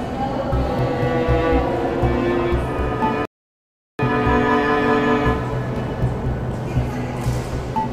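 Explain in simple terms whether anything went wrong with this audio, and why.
Yes, something went wrong: at 3.25 s the sound suddenly stops and stays silent until 3.99 s, a gap of about 0.74 s. This is a rebuffering stall, where the player ran out of downloaded audio and had to wait for more to arrive. What sets it apart from a dropout is that nothing is missing: the sound picks up exactly where it stopped, so the clip just runs longer.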